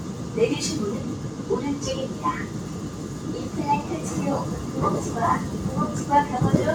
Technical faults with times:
0.00-6.74 noise suppressor applied to music or sounds

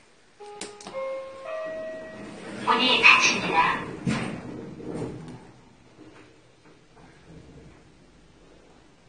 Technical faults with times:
0.00-9.08 transcoding between lossy codecs

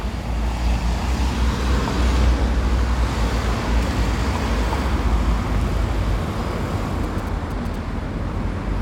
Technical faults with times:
7.04-7.76 GSM signalling bursts

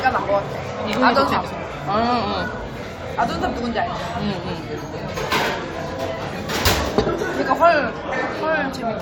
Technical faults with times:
none

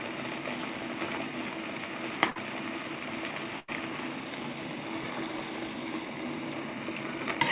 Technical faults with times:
2.30-2.37 burst of packet loss
3.59-3.70 burst of packet loss

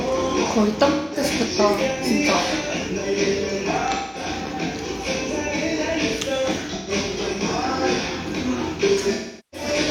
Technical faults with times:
0.91-1.23 AAC frame loss with concealment
3.93-4.26 AAC frame loss with concealment
6.75-6.91 AAC frame loss with concealment
9.14-9.67 AAC frame loss with concealment

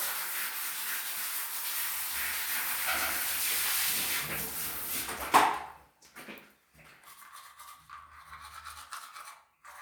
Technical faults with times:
1.55-3.93 doubled audio track

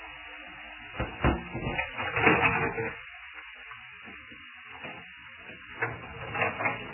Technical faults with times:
0.00-6.94 MP3 compression

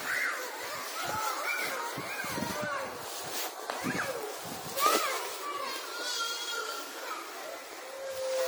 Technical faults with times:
0.00-8.47 generation loss

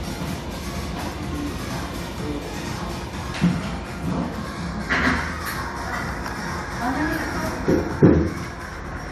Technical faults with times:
none

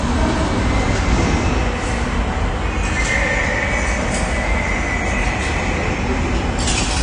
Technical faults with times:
0.00-7.03 AAC compression

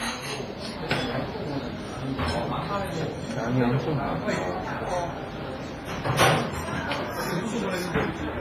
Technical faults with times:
0.00-8.40 WMA compression

